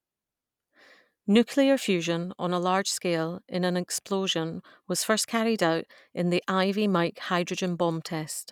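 Nothing technically wrong turns up anywhere in this bit of speech, so there's no fault to time or trace back to a cause.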